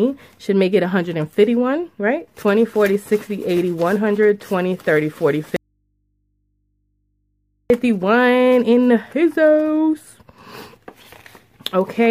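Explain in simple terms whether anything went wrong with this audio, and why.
At 5.56 seconds the sound suddenly cuts out, and for a little over two seconds, until 7.70 s, all that remains is a very faint low hum before the sound snaps back. This is an audio dropout to a faint residue. The abrupt switch, with no fade, shows it isn't a natural pause. The likely cause is the signal being lost briefly while the recording path stayed switched on, so the open input picked up mains hum.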